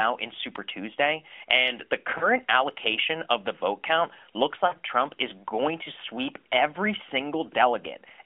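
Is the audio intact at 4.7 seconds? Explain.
No. Lost AMR speech frames: right after "the vote count looks", radio errors corrupted 40 ms of data, which fits two 20 ms frames, so the decoder reused its last pitch and vocal tract settings with falling gain from 4.68 to 4.74 s. This gives a brief warbling dip before the voice returns weak for a moment.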